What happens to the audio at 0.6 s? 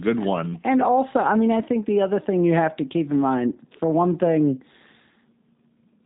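At 0.6 s, like everywhere else in the clip, you're hearing G.729 codec damage. The speech is rebuilt from a vocal tract filter, pitch predictor and a few pulses per frame, so it sounds rough and synthetic, with nothing above 3.8 kHz, which fits an 8 kbit/s codec.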